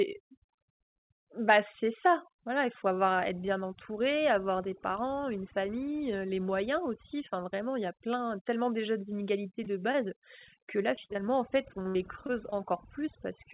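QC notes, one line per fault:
throughout: overdone noise removal. The noise reduction is set far too strong, so narrow frequency bands that sit near its noise estimate are pulled down or switched off from moment to moment, taking the softer parts of the speech with them. The background collapses to near silence scattered with twinkling specks. Unlike packet loss, this is constant and tied to level rather than to moments in time, and nothing goes missing outright. The narrow band with nothing above 4 kHz comes from the call path and is no part of this fault.
9.64 and 9.92 s: short concealed packet loss. Just after "plein tellement déjà d'inégalités", about 20 ms of audio failed to arrive in time, and the same happened again a quarter of a second later. Each time the receiver covered the hole by carrying on the last sound, pitch-based if voiced and as shaped noise if not, then blended back into the real audio. 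It is heard as a single brief smear or wobble. These are isolated events, not a run.
10.64–11.17 s and 11.83–12.54 s: repeated packet loss (robotic sound). Four holes fall in each stretch, on either side of "en fait". They total about 100 ms in the first and 120 ms in the second, and the longest runs to about 59 ms. About a sixth of each span is patched by continuing the last sound, and the next gap arrives before the sound recovers. The result is choppy with pieces missing, a cluster of losses rather than the lone smears heard just before.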